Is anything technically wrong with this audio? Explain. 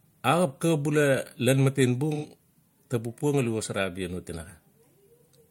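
Yes, from 2.14 to 2.26 s there's AAC frame loss with concealment: roughly 85 ms of lost frames get patched from the last good spectrum, leaving a brief smeared, phasey blur.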